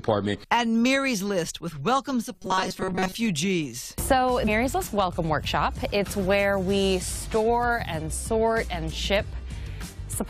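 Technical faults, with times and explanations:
2.31 to 3.15 s, robotic sound from repeated short buffers: for a bit under a second the audio turns into a stiff, metallic buzz pitched at about 188 Hz, still loosely tracking the shape of the sound underneath. The likely cause is the playback side running short of fresh data and looping a tiny chunk, around 5.3 ms, to fill the gap. Most of that stretch is repeats, and the fixed loop length stamps that steady pitch on everything.
4.47 to 4.49 s, damaged data in a compressed stream: a quick blip, over in about 20 ms. A patch of the compressed data here is corrupt, so the decoder can't make sense of those frames, loses its place, and hunts for the next good frame header. The garbled decode gives the blip.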